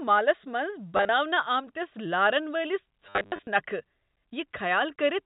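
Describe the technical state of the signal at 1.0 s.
Packet loss with last packet repeated spans 0.97 to 1.09 s: about 80 ms is replaced by copies of earlier packets, in runs up to 30 ms. Runs stutter robotically; the waveform shows identical repeated blocks.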